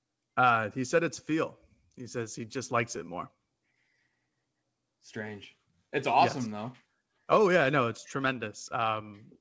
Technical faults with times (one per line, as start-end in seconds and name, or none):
0.00-9.41 clock drift between sender and receiver
0.04-9.40 repeated timing corrections